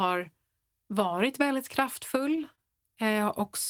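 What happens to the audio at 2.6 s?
At 2.55 s the speech briefly stalls, through about 2.61 s. This is a short stall from a late packet. A packet arrived after it was due, so the jitter buffer ran dry. The receiver held the last sound for 26 ms while it waited. Then playback resumed from the same point. Nothing is lost, but everything after is 26 ms later. You hear one sound drawn out slightly, with a faint buzzy or flattened quality.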